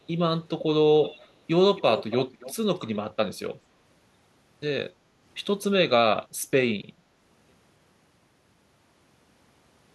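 Echo leak at 1.03–1.27, 1.76–2.16, 2.34–2.55 and 2.93–2.97 s: a faint copy trailing 276 ms behind, roughly 15 to 25 dB down, likely a far-end canceller missing loudspeaker pickup.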